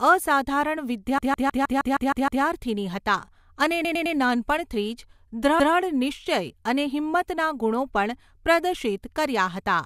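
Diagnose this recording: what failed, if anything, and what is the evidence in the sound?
The failure is repeated frames at the codec or storage stage. From 1.18 to 2.43 s the same 156.7 ms block of speech loops eight extra times before "હતાં અને નાનપણથી", which fits a run of about six compressed frames being written or sent again. From 3.84 to 4.16 s, just after "હતાં અને", a 104.5 ms block plays three extra times. The decoder simply replays duplicated data, producing a stutter and lengthening the audio by about 1.57 s in total.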